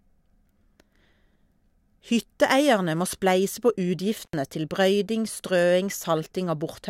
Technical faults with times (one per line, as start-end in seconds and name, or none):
4.22-4.33 intermittent contact